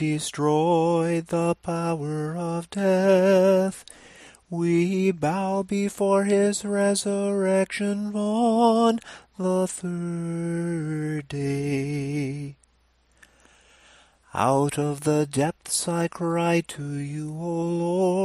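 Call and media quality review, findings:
Nothing stood out on listening; no findings to raise against this recording.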